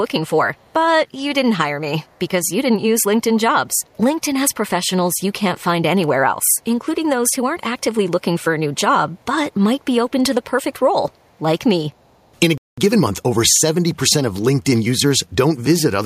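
Faint echo leak at 0.55–0.73, 2.05–2.28, 2.44–2.49, 3.67–3.96, 6.44–6.61, 9.18–9.24, 11.11–11.39 and 12.0–12.35 s: a 419 ms delayed copy, about 40 dB down (about 35 dB at 3.67 s), likely from incomplete echo cancellation. A playback stall from 12.58 to 12.78 s silences the speech mid-flow for about 0.2 s, likely from buffer underrun. Time-compressed catch-up follows until 13.16 s, playing 1.5 times fast at normal pitch.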